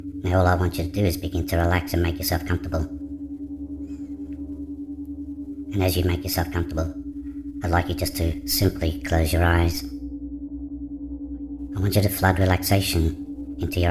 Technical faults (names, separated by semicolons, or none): wrong sample rate